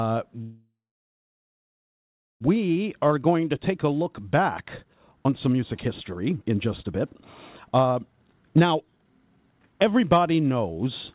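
From 0.42 to 2.43 s there is a call audio freeze. The last sound is stretched into a decaying buzz or hiss, then about 1.65 s of silence, likely because delayed packets drained the jitter buffer. Unlike a dropout, nothing is lost: the speech resumes where it stopped, about 2 s late.

Jitter buffer speed-up follows twice, from 2.76 to 7.16 s at 122% speed and from 7.69 to 10.02 s at 143%, each trimming roughly a second of backlog. Many tiny pitch-period cuts make the speech sound rushed while the pitch stays put, which separates it from a simple faster playback. Throughout, the narrowband call codec leaves nothing above 4 kHz.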